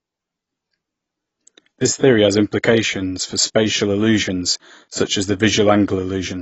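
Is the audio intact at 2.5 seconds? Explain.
No. Throughout the clip, including 2.5 s, the speech was likely squeezed through low-bitrate AAC compression, consistent with roughly 24 kbps AAC-LC. The encoder discards everything above 8 kHz and coarsely quantises the rest, so the speech sounds dull and smeared, with a warbling, fizzy edge on sibilants.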